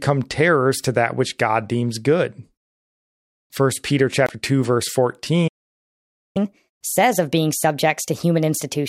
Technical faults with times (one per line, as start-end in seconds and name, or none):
4.26-4.29 Bluetooth stall
5.47-6.37 playback stall
6.37-8.88 catch-up at higher speed